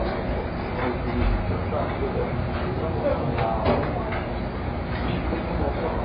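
From start to end, the sound is dull, with nothing above 5 kHz, and carries a smeared, warbling, fizzy texture. A plain low-pass filter would only muffle it. The gappy, swirling artefacts point to heavy AAC compression, likely AAC-LC at about 16 kbps.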